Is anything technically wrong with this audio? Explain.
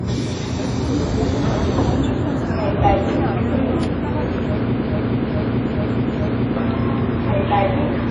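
Yes, two things. Throughout, it's likely WMA compression: plainly audible washy, ringing damage, nothing above 10.1 kHz, which fits a low bitrate around 32 kbps.

From 4.85 to 6.56 s there's a broken-record loop: a 428 ms fragment repeats four times back to back, likely a stalled stream resending its last fragment, so that stretch's real audio is lost.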